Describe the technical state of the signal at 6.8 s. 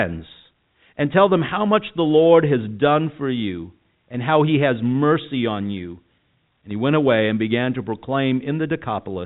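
At 6.8 s the speech is intact, with no fault present beyond the 4 kHz ceiling and faint level-following hiss of the G.711 telephone coding that carries it.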